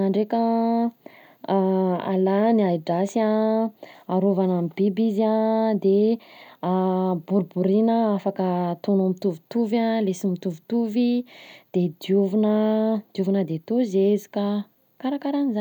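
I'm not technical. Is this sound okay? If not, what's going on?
Yes, this one's fine: there's nothing wrong with it that you'd need to worry about.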